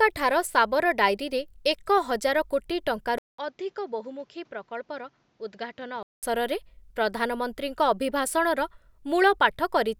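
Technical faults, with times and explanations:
3.18–6.23 s, input switched to a poorer device: after a 200 ms gap the speech turns duller and about 10 dB quieter, with nothing above 7.6 kHz and new background noise roughly 35 dB down. It then recovers, likely from a temporary narrower-band microphone.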